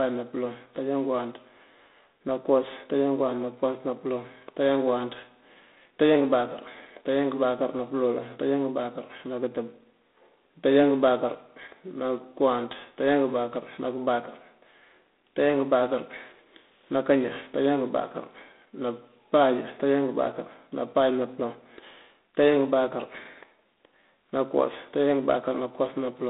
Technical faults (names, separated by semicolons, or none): G.726 ADPCM